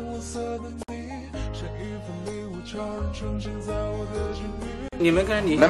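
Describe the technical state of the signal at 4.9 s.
At 4.9 s there is a gap at a join of encoded pieces. The sound falls silent from 4.88 to 4.93 s, about 40 ms, then resumes exactly where it stopped. The audio was encoded as separate pieces, here about 4 s long, and joined without trimming, so the encoder's start-up delay and last-frame padding remain as silence. Unlike a dropout, nothing is lost, and the abrupt edges are smeared by the codec.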